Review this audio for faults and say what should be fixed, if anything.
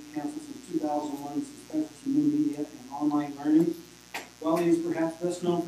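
There's a mains buzz running under the whole clip, a steady raspy edge rather than a clean hum, sitting roughly 25 dB below the sound itself. It's built on 60 Hz: something like a dimmer, a rectifier or an unshielded run is letting sharp switching spikes in twice per mains cycle, and those spikes carry a stack of 60 Hz harmonics up into the several-kHz range, which is why it rasps instead of just humming. To prevent it, keep the signal path away from dimmers and switching supplies and use properly shielded, grounded cabling.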